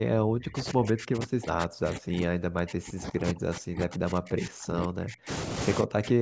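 From 0.0 to 5.3 s and again from 5.82 s to the end, the speech dips by about 40 dB. This is likely speech suppressed in double talk, where the echo canceller muted the near talker along with the echo.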